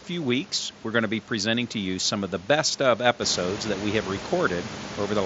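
There are no technical faults to describe in time order; the room noise that swells by about 13 dB around the 3-second mark is part of the recording itself, heard through a Bluetooth mSBC headset link.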